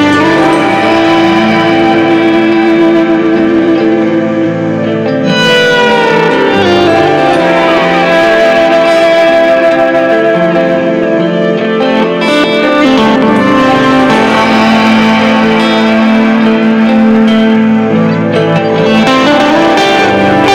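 A harsh, gritty fuzz rides on every loud moment from start to finish, with a brittle crackle on the strongest peaks. This is hard clipping: the audio was driven about 8 dB beyond what some stage in the chain could pass, so the waveform's tops were sheared flat. Something like 7 percent of the samples hit that ceiling, enough that the added high harmonics colour all the louder sound rather than only isolated transients.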